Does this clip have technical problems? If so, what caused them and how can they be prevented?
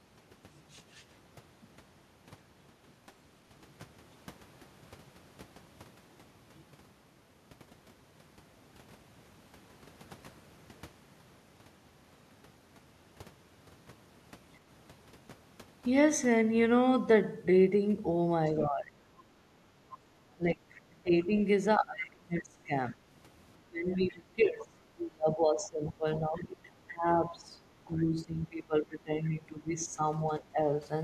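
Yes. Speech suppressed in double talk occurs at 18.59–18.97, 20.36–21.33, 21.78–23.03, 23.56–30.02 and 30.40–30.58 s. The talker drops by about 20 dB, nearer 30 dB around 22 s and only about 10 dB at 30.40 s, likely because the echo canceller ducked everything while both sides spoke. An echo canceller with better double-talk detection, or a headset, prevents it.

The other side's voice leaking through appears as brief scraps at 19.92–19.96 and 20.75–20.81 s, roughly 20 and 30 dB below the talker. It is likely loudspeaker playback left in the microphone signal. Unlike reverberation, it is a separate voice rather than a tail of the talker. Using headphones prevents it.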